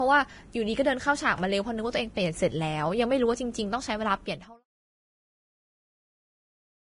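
Speech carries heavy coding damage from start to end, most likely Vorbis compression at a rate that fits roughly 20 kbps. Nothing is present above 10.5 kHz, and the treble below that cut-off turns into grainy, hissy noise that rises and falls with the speech, while consonant attacks blur. That signal-tied graininess separates it from a plain low-pass filter, which would only dull the top, and from steady background hiss. The smooth fade-out running from about 4 s to 4.65 s is an intended edit, not a fault.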